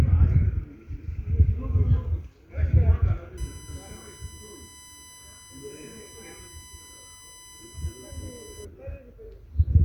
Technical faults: USB whine

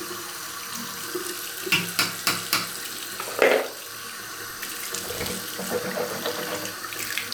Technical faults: none

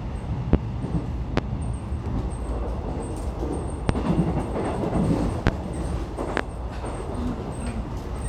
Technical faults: loud pop

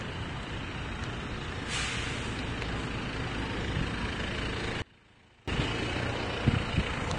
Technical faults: Vorbis compression; audio dropout to a faint residue

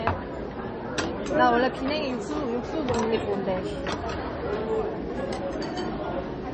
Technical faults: MP3 compression

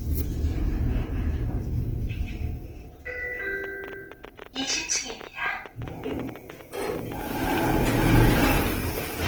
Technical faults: Opus compression; train of clicks

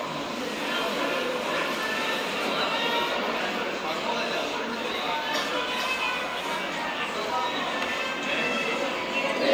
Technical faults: none

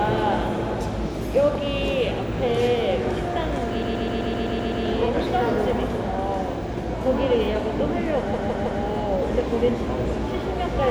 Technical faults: repeated frames

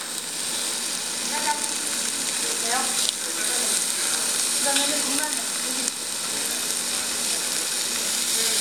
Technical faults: none

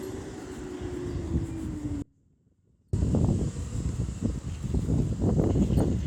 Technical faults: audio dropout to a faint residue

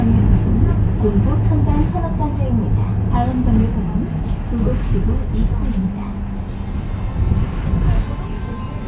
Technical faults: none

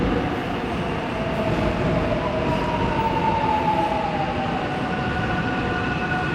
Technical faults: none

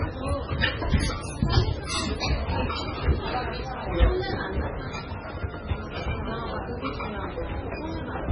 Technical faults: MP3 compression

